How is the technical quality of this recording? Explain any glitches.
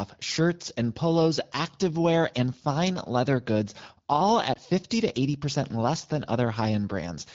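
There is one audible glitch in this speech recording, carried through an AMR wideband (HD Voice) codec whose coding sounds clear, as fits the 12.65 kbit/s mode. Just after "fine leather goods all", from 4.53 to 4.58 s, the sound dips and warbles briefly. This is a lost AMR speech frame, consistent with a single 20 ms frame failing its checksum. The decoder filled the gap by repeating the previous pitch and vocal tract settings at reduced gain.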